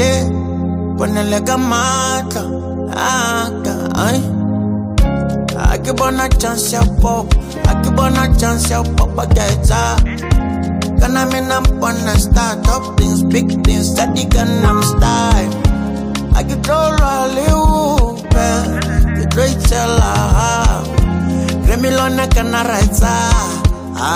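No technical faults can be heard anywhere in the audio. Nothing breaks up, drops out or changes character at any point.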